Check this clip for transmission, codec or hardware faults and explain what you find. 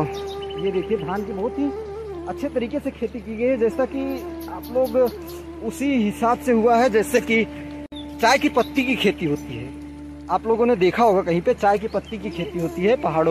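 One fault: a gap at a join of encoded pieces. At 7.86 s the sound drops out for about 59 ms, until 7.92 s, with smeared edges, then resumes where it stopped. Separately encoded pieces were joined untrimmed, leaving encoder start delay and last-frame padding in place.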